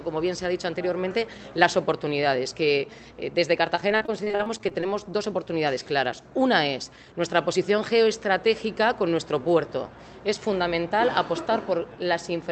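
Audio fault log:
3.75–4.84 s, repeated packet loss (robotic sound): a quick run of short dropouts, the longest about 39 ms and roughly 240 ms lost in total. Each hole gets patched by stretching out the last bit of sound, so about a quarter of this stretch is filler. That's why it comes out choppy, with pieces missing.
4.61–5.12 s, jitter buffer slow-down: overlapping the tail of those dropouts, playback drags to about 92% speed at the same pitch, adding roughly 47 ms. The buffer was short on reserve, so the receiver repeated tiny pitch-period slices to refill it. That drawn-out feel comes from those repeats, and the top end stops around 8 kHz, which fits an Opus call path.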